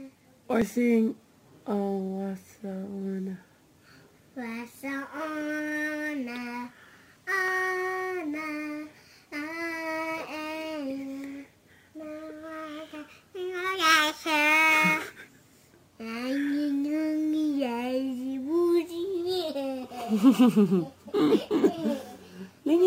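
Throughout the clip there is imaging from sample-and-hold upsampling: each sample was simply repeated to raise the rate, with no smoothing filter, which fits audio at about 22 kHz being brought up to 48 kHz. The unfiltered steps leave mirrored copies of the spectrum, the lowest sitting between about 11 kHz and 22 kHz at roughly 22 dB below the signal. It is heard as a bright metallic fizz that rises and falls with the sound, moving against its pitch.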